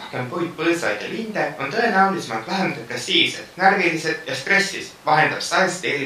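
No technical faults can be heard at any point in this speech recording.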